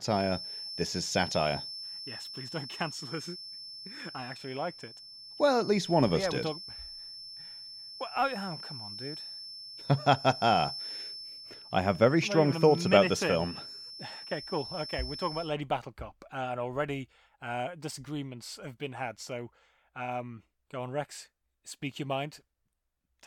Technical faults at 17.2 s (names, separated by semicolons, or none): none